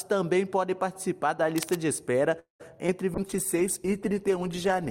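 A worn cable, connector or control being moved is the likely cause of the first fault: its contact resistance fluctuates rapidly between 1.56 and 1.77 s. This cable scratch noise lays dense, irregular bursts over the audio, heard as a brief scratching, rustling texture roughly 10 dB below the signal. It sits on top of the sound rather than replacing it. Packets were most likely held up in transit from 2.39 to 2.62 s, draining the jitter buffer, and the result is a call audio freeze. The receiver stretches the last sound into a fading buzz or hiss that settles into silence for about 120 ms. Then the audio resumes exactly where it stopped, so about 0.2 s of gap has been inserted and nothing is lost. From 2.87 to 2.90 s a short concealed packet loss occurs: about 20 ms of the stream never reached the decoder in time. The receiver patches roughly 15 ms of that by extending the preceding sound and blending back in, which comes through as a quick smear or wobble where the original detail is gone. 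At 3.15 s the call's bandwidth estimate falls and the encoder is pushed from 128 kbps down to 21 kbps, holding near that floor for about 1.7 s until the clip ends. This call bitrate drop makes the coding much coarser and trims the upper frequencies, so the remaining audio turns rough, watery or muffled.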